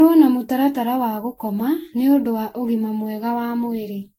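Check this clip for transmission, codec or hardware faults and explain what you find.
The speech carries generation loss from start to finish. Every sound is swirly and hollow. Consonant onsets are smeared, and nothing survives above 16.7 kHz. The damage is heavier than a single lossy pass would leave. That points to repeated re-encoding, likely around ten Vorbis passes at a rate near 58 kbit/s. Each decode and re-encode quantises the signal again on a shifted frame grid. Noise and spectral gaps pile up with every round.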